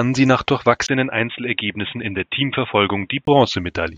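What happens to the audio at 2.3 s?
At 2.3 s the speech sounds dull and boxy, with nothing above 3.8 kHz, faint new background noise and no change in loudness. This runs from 0.87 to 3.27 s, starting after a 20 ms gap, and is likely the input switched to a poorer, narrower-band device.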